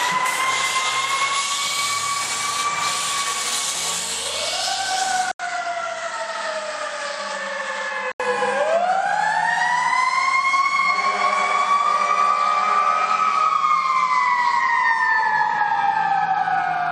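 From 5.32 s to 8.20 s the recording likely switched its input to a poorer device, then switched back. At 5.32 s an 80 ms silence marks the changeover. The sound then loses everything above 8.6 kHz and turns duller, drops by roughly 5 dB, and carries a different background noise sitting around 45 dB below the signal. At 8.20 s the original brightness and level return.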